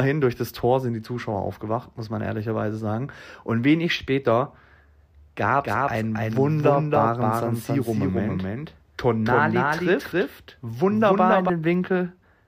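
From 5.64 s to 11.50 s the speech is heard twice, a dry copy about as loud trailing roughly 0.3 s behind: a doubled audio track, likely from a second, slower capture path.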